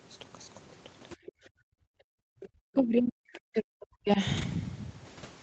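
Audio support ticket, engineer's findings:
Background gated by the echo canceller, 1.23–2.06 s. Room tone ducks hard, about 40 dB at the deepest, for roughly 0.7 s total, then pops back. That's the AEC's suppressor clamping the mic while far-end audio was playing out the speaker, releasing once playback stopped. Feels like the floor falling out under the talker.

Other side's voice leaking through, 1.26–1.32 s and 2.40–2.47 s. Short scraps of a second voice, roughly 25 dB under the talker. Likely residual echo: the canceller didn't fully subtract the loudspeaker signal from the mic pickup, so bits of far-end audio ride along.

Speech suppressed in double talk, 2.34–4.19 s. Talker's level drops in chunks, around 40 dB at worst, about a second and a half affected overall. Likely both ends talking at once, with the AEC unable to tell near-end speech from echo and pulling everything down to be safe.

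Lost packet rebuilt from error correction, 2.77–2.79 s and 4.37–4.43 s. No gaps, just brief rough, grainy patches, 20 ms then 40 ms, which fits one lost packet and then two. Opus in-band FEC covered them with low-bitrate copies carried in the following packets, so the decoder played those coarser versions instead of silence.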